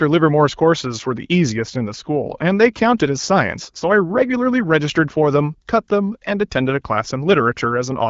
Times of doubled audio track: none

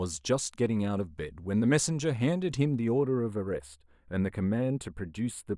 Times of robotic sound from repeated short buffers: none

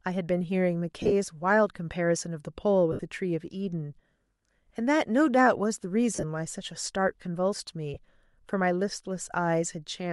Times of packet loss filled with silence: none

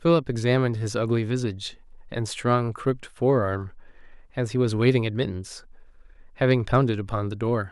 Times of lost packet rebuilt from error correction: none

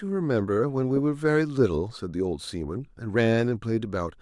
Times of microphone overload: none

